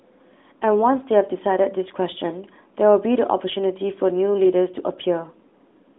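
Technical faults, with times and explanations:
No technical faults can be heard in this clip.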